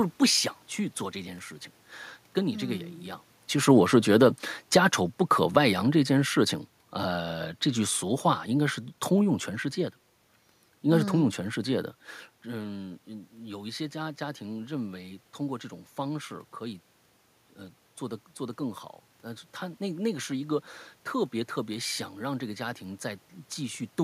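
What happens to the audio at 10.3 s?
Nothing goes wrong at 10.3 s; the speech there is intact, with no dropout, distortion or glitch.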